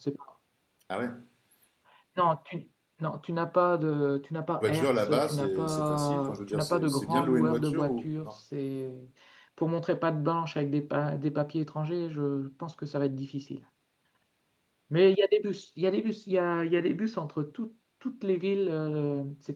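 A speech clip with one jitter buffer speed-up from 2.03 to 5.76 s: the receiver trimmed short pitch-period segments repeatedly to drain excess buffered audio, so delivery runs at about 108% speed with unchanged pitch, sounding hurried and shedding roughly 0.3 s overall.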